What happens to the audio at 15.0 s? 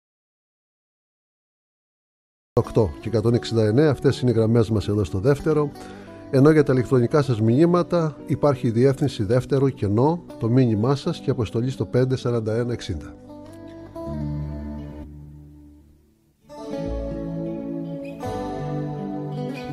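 At 15.03 to 15.05 s the audio jumps abruptly ahead with a brief blip, likely a stream segment skipped when a segment failed to load and playback continued.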